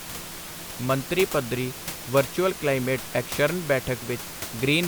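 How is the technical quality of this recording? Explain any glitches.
The technical quality of this recording is good, with no glitches to explain beyond the room's own background noise sitting about 12 dB below the speech.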